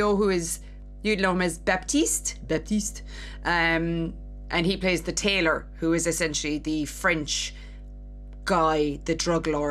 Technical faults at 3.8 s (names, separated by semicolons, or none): mains hum